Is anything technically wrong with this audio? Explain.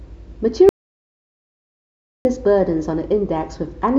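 Yes. An audio dropout to silence runs from 0.69 s to 2.25 s, cutting about 1.56 s out of the speech. The input was likely lost, through a disconnect, failed link or mute, while the recorder kept writing zeros. The speech stops abruptly mid-flow and resumes just as suddenly, and the gap is dead digital silence with no room tone. That complete loss of background separates it from a natural pause or a noise gate, which would leave or fade the background.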